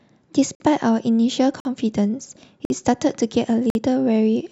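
Speech, broken up by a gap between chunks: four hard-edged 50 ms holes at 0.55–0.60, 1.60–1.65, 2.65–2.70 and 3.70–3.75 s. Nothing's missing, just delayed. Each second of sound plays, then silence gets wedged in before the next one-second chunk starts.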